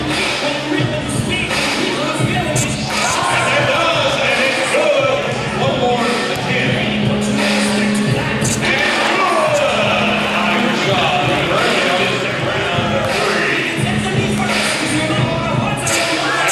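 No technical faults are audible anywhere in the recording.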